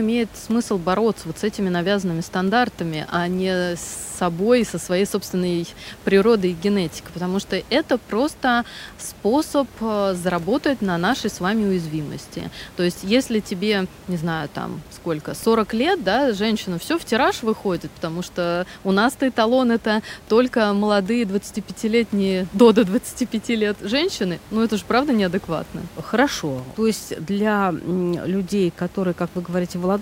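A speech recording with no technical faults to report. Room noise sits in the background about 22 dB below the speech, which is part of the recording itself.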